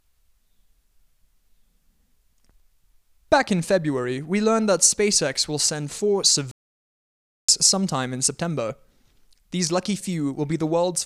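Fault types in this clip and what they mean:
playback stall: the speech cuts to silence after "will send four" at 6.51 s and picks up again with "sometime in" at 7.49 s, a gap of about 0.97 s, likely because the player ran short of buffered data or its output thread was blocked.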